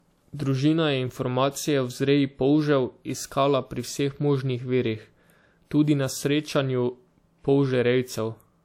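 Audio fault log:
throughout, low-bitrate audio saved at a high bitrate: the speech has nothing above 16.7 kHz, and the old codec damage is still baked in. That fits a 64 kbit/s WMA pass, likely re-saved as a roomy 192 kbit/s MP3, which couldn't restore anything.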